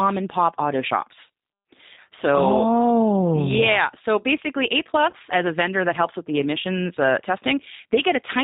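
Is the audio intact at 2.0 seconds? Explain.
No. The G.729 codec runs through the whole clip at 8 kbit/s: speech is rebuilt from a vocal-tract filter, a pitch predictor and a few pulses per frame, with nothing above 4 kHz. Here that gives a plainly audible rough, synthetic, band-limited quality, and 2.0 s is no exception.

Just before, from 1.94 to 1.98 s, there is VoIP packet loss concealed by the speech codec, consistent with one lost packet carrying about 30 ms of audio. The decoder fills the gap by extending its last pitch and filter at falling gain, so the sound turns into a brief buzzy tone or coloured noise that fades. Because each frame builds on the previous one, the sound at 2.0 s may still be weak or distorted while the decoder recovers.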